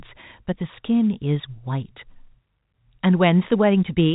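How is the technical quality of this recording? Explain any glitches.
No glitches can be heard anywhere in this recording.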